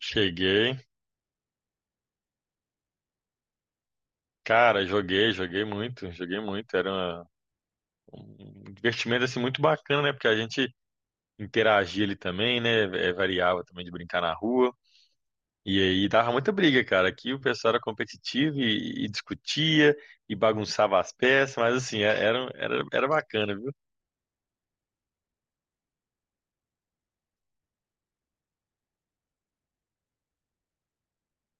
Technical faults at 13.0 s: none

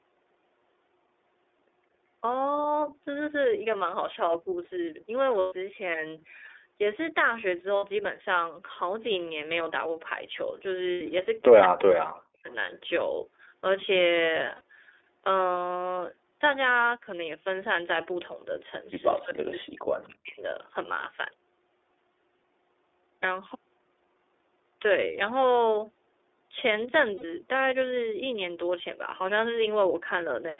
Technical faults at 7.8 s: iLBC codec; lost iLBC frames

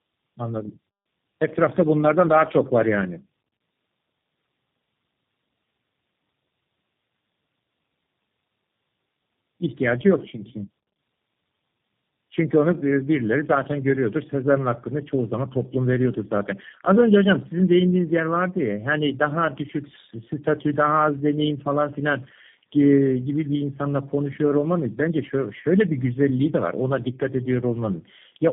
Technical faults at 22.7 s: tandem speech coding

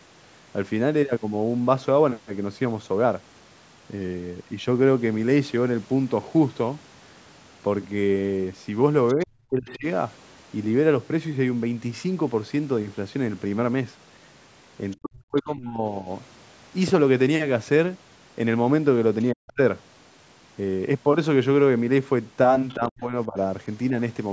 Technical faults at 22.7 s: other side's voice leaking through; speech suppressed in double talk

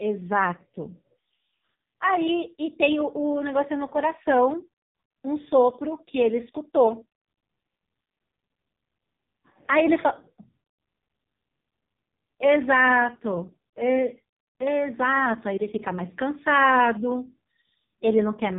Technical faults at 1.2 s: AMR narrowband mobile codec

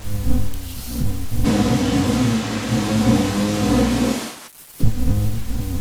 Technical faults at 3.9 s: switch to a distant microphone

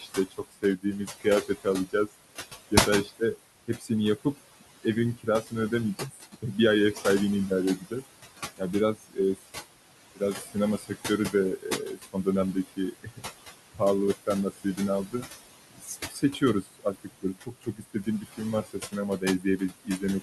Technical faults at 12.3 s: noise suppressor artifacts; speech cut by the noise suppressor

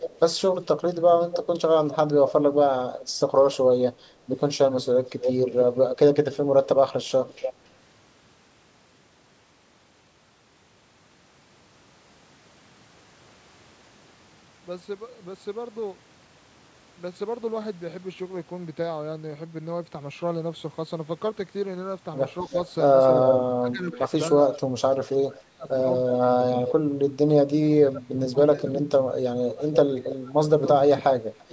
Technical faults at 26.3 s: speech suppressed in double talk; echo leak

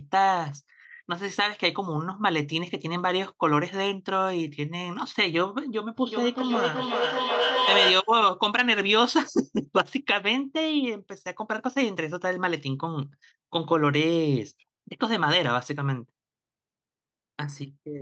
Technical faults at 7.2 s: feedback echo between two devices

